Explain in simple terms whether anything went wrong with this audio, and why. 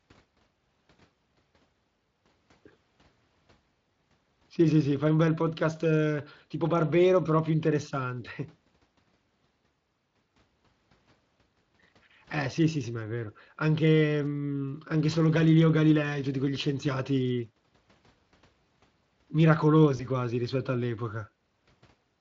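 One hiccup, around 19.97 to 20.06 s, just before "quasi rispetto": VoIP packet loss concealed by the speech codec. A single chunk of speech, about 20 ms, went missing, so the Speex decoder guessed by stretching the previous sound, which leaves a brief buzzy or noisy smear.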